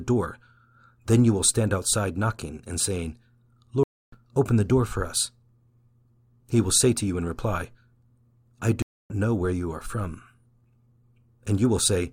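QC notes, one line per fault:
3.83–4.17 s and 8.82–9.10 s, stream reconnect: the speech drops out for about 0.29 s and 0.28 s, then picks up roughly 0.3 s and 0.2 s further on, skipping a little of the speech. The connection broke, and the player reconnected and restarted its decoder mid-stream at a later point.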